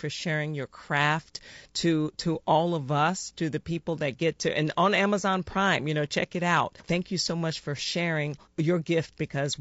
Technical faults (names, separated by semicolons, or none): low-delay AAC compression